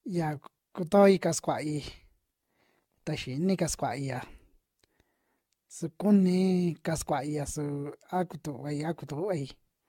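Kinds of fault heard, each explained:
Generation loss: The speech sounds swirly, hollow and smeared, and consonant attacks are blurred throughout. The likely cause is repeated lossy re-encoding, around ten passes of an AAC-LC codec at about 96 kbit/s, each quantising on a shifted frame grid so errors pile up. On a spectrogram there's a hard ceiling at 17 kHz, flickering holes and speckle across the upper bands, and smeared vertical edges at onsets. The waveform shows softened transients.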